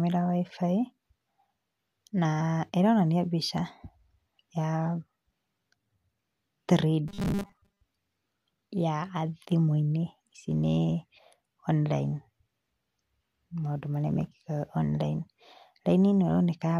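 Robotic sound from repeated short buffers affects this speech clip from 7.08 to 7.81 s, where the voice turns into a rigid metallic buzz at 200 Hz. The likely cause is a stalled audio feed, with a 5 ms chunk looped over most of the span while real audio was skipped.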